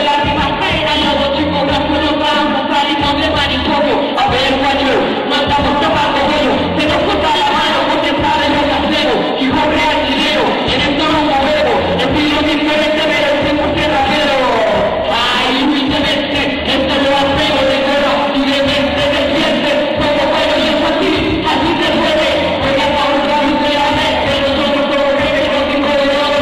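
Damaged data in a compressed stream occurs at 4.14–4.19, 6.32–6.36, 10.64–10.68, 15.10–15.14 and 25.08–25.14 s. Corrupted bytes make the decoder misread frames and lose sync until it finds the next header, producing brief chirps or blips about 40 to 56 ms long.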